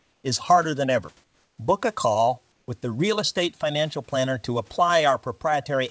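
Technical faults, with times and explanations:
0.00–0.24 s, 1.24–1.58 s and 2.52–2.68 s, comfort noise in place of the background: before "is harder than ever", after it, and between "a call" and "with the", the room tone becomes a steady, featureless hiss about 3 to 4 dB quieter. Unlike a dropout, it never goes silent. This is likely discontinuous transmission.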